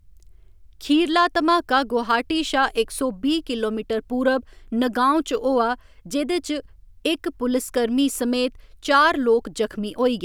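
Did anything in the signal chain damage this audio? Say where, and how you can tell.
No, nothing in the signal chain damaged this audio.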